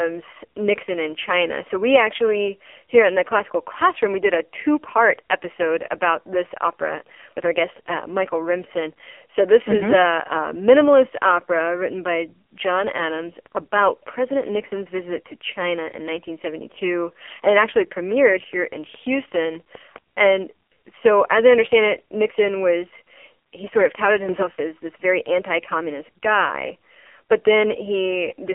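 AMR narrowband mobile codec, throughout: heavy coding damage leaves the speech buzzy and synthetic, confined to a 300 Hz to 3.4 kHz line band with nothing above 3.5 kHz, which fits the low 5.9 kbps mode.

Train of clicks, 18.12 to 19.97 s, between "it actually" and "and so as I": about ten evenly spaced ticks at 4.9 per second, peaking roughly level with the speech, likely from interference or a faulty connection.

Sudden gain jump, 24.29 to 24.43 s, after "he sort of touted" and before "as this very anti": speech and background leap together by about 7 dB, likely a gain change applied without a ramp.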